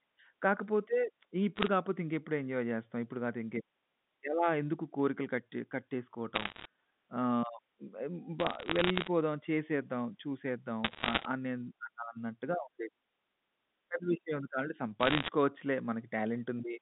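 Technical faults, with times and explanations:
1.56–1.68 s, 6.34–6.65 s, 8.40–9.08 s, 10.84–11.25 s and 15.01–15.28 s: bit errors on a digital phone line. Flipped bits on the G.711 mu-law line corrupt single samples, so you get sharp ticks and crackle over the speech. It's worst around 10.84 s, at about one bit in seventy, and lightest at 1.56 s and 8.40 s.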